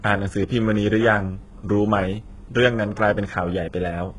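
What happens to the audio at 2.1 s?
At 2.1 s the speech has the gritty, lispy treble of HE-AAC compression, which runs through the whole clip and likely comes from heavy coding at a very low bitrate. The upper spectrum is rebuilt from copied lower bands, so a spectrogram shows smeared, repeated-looking treble patches and a hard ceiling near 11.4 kHz.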